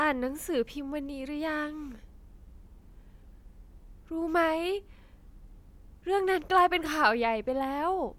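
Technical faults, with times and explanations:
No technical faults detected.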